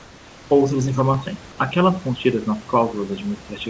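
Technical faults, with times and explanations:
0.00–0.50 s, comfort noise in place of the background: a steady, featureless hiss about 2 dB quieter replaces the real room sound, likely from discontinuous transmission while no speech is detected.
1.14–3.70 s, input switched to a poorer device: the sound abruptly turns dull and boxy with no gap, as the band narrows from the call path's 8 kHz to nothing above 3.8 kHz. The level stays about the same, and a faint new noise floor appears well below the speech, likely from a change to a narrower-band microphone.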